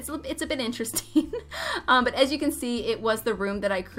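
At 1.64 s the audio drops out for about 2.7 ms in a block of digital silence: the signal cuts straight to zero and back without any fade, so the edges fuse into a single sharp tick. The gap length fits one unfilled 128-sample output buffer.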